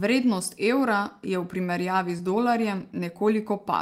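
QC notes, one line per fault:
2.17–2.28 s short concealed packet loss: about 20 ms of the speech arrived too late for the decoder, so the receiver synthesised roughly 14 ms by extending the preceding sound and crossfaded back, stretching timing by around 10 ms and leaving a brief smear.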